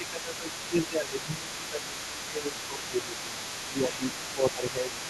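From 0.0 to 3.35 s the talker's level sags by roughly 10 dB across most of that stretch. This is speech suppressed in double talk: with both ends active, the echo canceller likely failed to tell local speech from loudspeaker echo and attenuated everything. The same ducking returns from 3.66 to 4.12 s, deeper at around 15 dB, and again from 4.34 to 4.94 s at around 10 dB, each time pulling the talker down.

Running underneath from 0.03 s to the end of the clip is the other side's voice leaking through, sitting roughly 15 dB below the main talker. The far-end audio played on the talker's loudspeaker was likely picked up by the microphone and not fully cancelled, so a second, fainter voice stays audible throughout.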